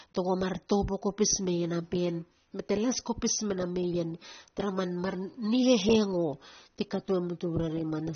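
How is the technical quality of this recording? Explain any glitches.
The recording has a clear, consistent compression problem running through the whole thing. Throughout the clip there's AAC compression damage, and it's plainly audible. Nothing gets through above about 6.3 kHz, so the speech sounds dull and boxed-in, and the sibilants come out fizzy and smeared rather than crisp. That's likely AAC-LC squeezed hard: the encoder drops the top band and quantises what's left coarsely, which fits a low bitrate somewhere around 24 kbps.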